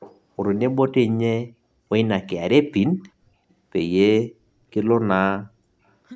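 From 0.0 to 0.19 s, a faint copy of the voice trails 386 ms behind. This is an echo leak, likely residue a loudspeaker-side canceller missed.

From 5.17 to 5.55 s, the voice sinks almost to silence. This is speech suppressed in double talk, likely the canceller ducking its own talker along with the loudspeaker echo while they overlapped.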